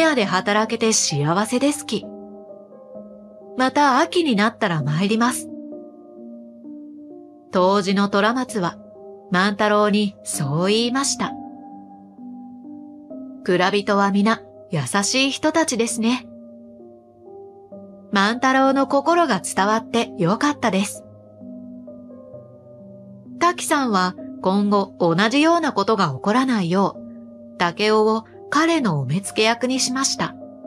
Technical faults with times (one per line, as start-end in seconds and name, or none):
none